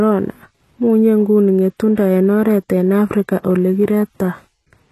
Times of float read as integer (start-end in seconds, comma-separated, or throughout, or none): none